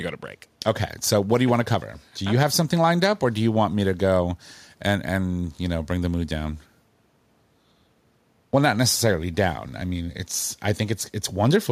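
There are no technical faults to describe in this speech recording.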